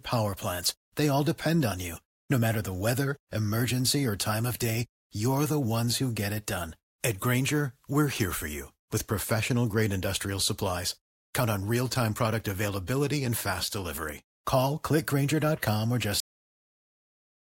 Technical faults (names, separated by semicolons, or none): cut-off end